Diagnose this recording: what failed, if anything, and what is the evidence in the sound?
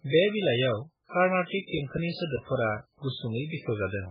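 Codec stage: a hard spectrogram ceiling at 5 kHz, with watery, swirly speech throughout. The likely cause is heavy MP3 compression at a very low bitrate.

Playback stage: CD scratch ticks, ten regular clicks from 1.39 to 3.14 s, each at most about 10 ms. They show as brief glitches in the waveform, one for each unrecoverable disc revolution.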